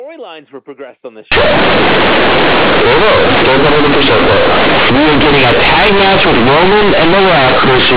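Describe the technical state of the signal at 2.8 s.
At 2.8 s you're inside a stretch of companded audio read as linear, running from 1.32 s to the end: A-law bytes play as raw 8-bit samples without expansion, so it's loud, buzzy distortion with heavy noise in gaps.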